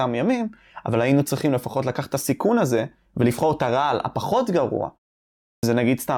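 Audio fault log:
5.53 to 5.63 s, clipped start after a pause. The speech resumes after a gap of 0.63 s, but its opening is missing. About 99 ms of sound is swallowed, so the speech enters abruptly out of silence without its first sounds. During the pause the output device went idle. It then needed time to wake or lock again before it could pass audio, and whatever arrived in that window was lost.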